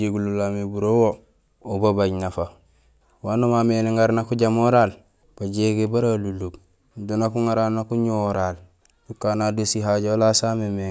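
No technical faults heard.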